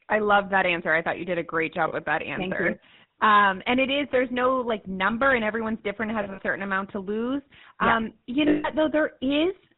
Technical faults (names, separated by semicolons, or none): GSM full-rate codec; lost GSM frames